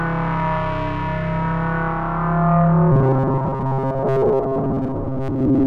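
From 2.92 s to the end, the sound turns into a robotic buzz at 134 Hz, likely from repeated short buffers, each repeat about 7.5 ms, looping for most of that stretch.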